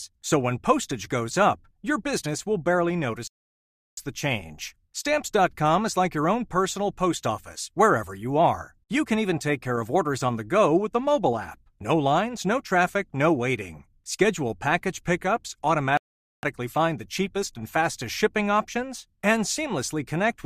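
Speech clip with two rebuffering stalls, at 3.27 s (about 0.7 s of silence) and 15.97 s (about 0.46 s): the player ran dry, waited, then resumed right where it stopped.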